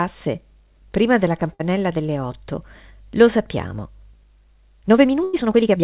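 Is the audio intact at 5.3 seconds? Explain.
No. At 5.3 seconds the audio sits inside a time-stretched section running from 4.11 s to the end of the clip, played about 1.48 times faster. This is likely software squeezing the audio to fit a length by dropping short pieces while preserving pitch. It sounds rushed. On a spectrogram the harmonic spacing stays unchanged while events crowd together, and the waveform shows small splice discontinuities.

A burst of packet loss also falls exactly here, from 5.23 s to 5.35 s. The receiver extended the last sound for about 98 ms, fading it as it went. When the audio resumed, about 100 ms of material had been skipped. It is heard as a held, fading tone or hiss followed by a jump. A spectrogram shows a frozen, repeating pattern that dims, and the waveform shows a decaying envelope with an abrupt restart.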